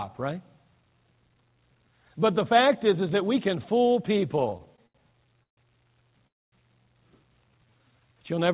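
From 4.5 to 5.59 s, repeated stalls (stutter): the jitter buffer ran dry eight times, with the longest wait 141 ms. The speech drags and stutters while about 292 ms is filled with continued sound.

At 6.27 to 6.54 s, a call audio freeze inserts a 251 ms gap, almost all of it silence. It was likely caused by delayed packets emptying the jitter buffer, after which the speech resumes intact.

From 7.51 to 8.18 s, a jitter buffer slow-down repeats pitch periods to rebuild its reserve, adding 117 ms. The speech runs at 84% speed with unchanged pitch.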